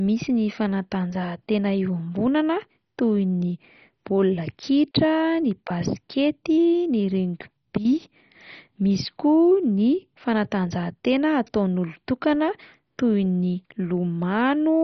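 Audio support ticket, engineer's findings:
Dull, band-limited speech with gurgling, granular distortion throughout; nothing above about 6.1 kHz. Likely MP2 compression at a starved rate, around 32 kbps: too few bits per sub-band, so upper bands switch off and flicker, with the rest coarsely quantised.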